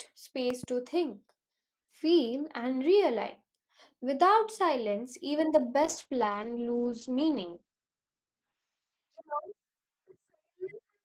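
A sudden voltage step, likely from a plug, switch or static discharge, entered the signal between 0.50 and 0.66 s, producing a loud pop heard as two sharp pops about 10 dB above the speech, which carries on underneath.

From 5.84 to 9.15 s, just after "silence even the", a call bitrate drop forced the encoder into much coarser coding. The sound turns rough and muffled, with the top end narrowing from 20 kHz to 8 kHz, which fits a fall from about 32 to 11 kbps.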